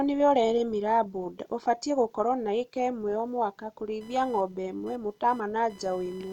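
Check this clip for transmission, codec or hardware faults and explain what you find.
One hardware fault is present. From 4.01 s, just after "ĩka imwe o mwaka", until the end at 6.33 s, there is computer activity noise. Shifting computer load disturbs the shared audio ground, which adds a buzzing chirp pulsing at around 1 kHz, roughly 30 dB below the speech.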